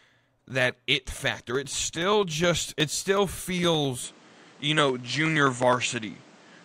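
At 4.04 s the speech abruptly loses its top end, with nothing above 9.4 kHz through to the end, and its tone, loudness (a shift of roughly 5 dB) and background noise all change together, with no gap at the join. This is most likely the input switched to a poorer device. A simple filter or codec bandwidth drop would narrow the band but would not bring in a fresh noise floor, here about 30 dB below the speech.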